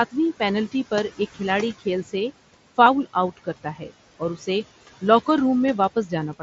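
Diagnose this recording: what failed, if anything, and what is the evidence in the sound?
Call processing is the main culprit here: noise suppressor artifacts run the whole way through. The room noise, sitting about 17 dB under the speech, gets pulled down by about 16 dB in the gaps and then swells back up under the speech as the per-band gains open.

Same stage, worse outcome: speech cut by the noise suppressor in three places. At 2.03 to 2.14 s the gain dips about 8 dB, enough to swallow a soft bit. From 3.37 to 3.91 s it's the deepest, about 16 dB, with roughly a fifth of a second of speech dragged down to near-noise level. Then at 4.19 to 4.48 s it drops about 13 dB. In each case the suppressor mistook quiet speech energy for steady noise and attenuated it with the background.

Over the Bluetooth link there's one brief concealed Bluetooth headset packet loss at 2.85 s. About 15 ms went missing, which fits a couple of lost frames on the mSBC link. 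The receiver papered over it by repeating the best-matching slice of recent waveform. Being a short run of two frames rather than a single loss, it comes through as a brief buzzy stretch and a small warble as real audio resumes. The light mSBC graininess on louder passages is the codec's usual character.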